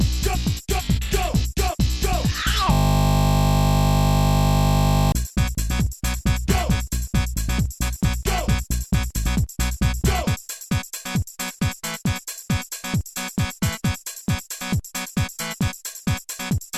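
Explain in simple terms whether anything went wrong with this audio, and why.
From 2.73 to 5.12 s the sound freezes into a steady buzz, a system hang loop: the computer stalled while the sound hardware replayed the same 20 ms slice about 120 times. Unlike ordinary electrical hum, it replaces the audio entirely, then stops abruptly.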